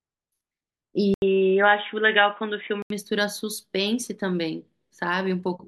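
At 1.14 s, likely an input switched to a poorer device: an 80 ms gap, new background noise, and sound capped at 3.8 kHz until 2.90 s, unlike simple filtering.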